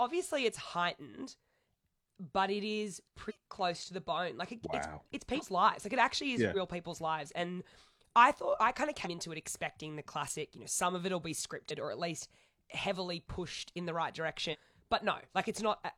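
The speech lurches forward six times: at 3.25 s between "it is" and "close to the bone", at 5.34 s, at 6.51 s after "it actually is yeah", at 9.01 s, at 11.66 s after "some of it'll be", and at 14.49 s. These are compressed frames skipped. Whole blocks of coded audio never play, so roughly 100 to 300 ms vanishes each time, in steps that fit a 46.4 ms frame.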